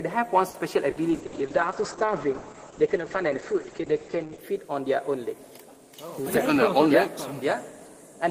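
At 0.49 s a short stall from a late packet begins and lasts until 0.57 s. One packet had not arrived when it was due, so the jitter buffer ran dry. The receiver held the last sound for about 50 ms until the packet turned up, then carried on from the same point. Nothing is lost, but the sound in progress is drawn out with a faint buzzy sustain, and playback runs about 50 ms later from there on.

From 0.90 s to 0.99 s there is a burst of packet loss. About 60 ms of audio never arrived in time. The receiver extended the last sound and faded it over that span, so it comes across as a brief held buzz or fading hiss. Playback then picks up further along, with roughly 60 ms of material simply missing.

At 1.11 s a call bitrate drop sets in and lasts until 4.50 s, with the coarsest coding for about 3.3 s of that. The call's bandwidth estimate fell and the encoder was pushed to far fewer bits, which fits a fall from around 32 kbps to about 9 kbps. 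The audible band narrows to about 8 kHz, so the sound turns muffled, rough and watery until quality returns at 4.50 s.

A second burst of packet loss falls inside that low-bitrate stretch, from 1.26 s to 1.35 s. Again about 60 ms was concealed by extending and fading the preceding sound, heard as a brief held buzz or fading hiss. Playback resumes with roughly 60 ms of material skipped.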